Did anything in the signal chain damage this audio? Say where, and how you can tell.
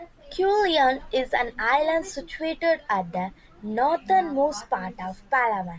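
No, nothing along the chain seems to have harmed this speech recording, and there's no stage I'd point to as having left a mark on it.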